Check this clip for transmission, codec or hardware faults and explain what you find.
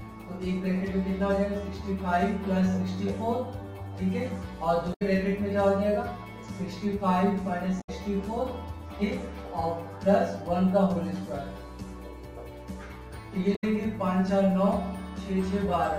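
Two faults are present: a constant comb-filter colouring and three brief decoding glitches.

Channel delay (comb filtering) runs through the whole clip. One channel trails the other by around 10 ms, and summing them to mono cancels shared content at evenly spaced frequencies starting near 50 Hz. The result is a hollow, phasey tone. Unlike a dropout, it never comes and goes.

Damaged data in a compressed stream occurs at 4.90–5.02 s, 7.77–7.90 s and 13.52–13.64 s. Corrupted bytes make the decoder misread frames and hunt for the next valid header, producing a short chirp, squawk, click or hole of about 120 ms.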